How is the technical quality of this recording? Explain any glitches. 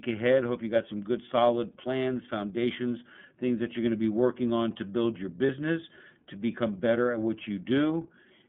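The recording is narrowband, coded speech with one brief dropout. iLBC codec throughout: the voice passes through a 30 ms-frame coder, matching its 13.33 kbps mode, with a line band of about 150 Hz to 3.6 kHz. The speech sounds muffled and plainly rough, slightly synthetic, with nothing above the band.

Lost iLBC frames, 5.46 to 5.50 s: a packet went missing, consistent with a single lost 30 ms frame. The decoder filled the gap by repeating the last pitch cycle with added noise, heard as a short, faintly buzzy held vowel before normal speech resumes immediately.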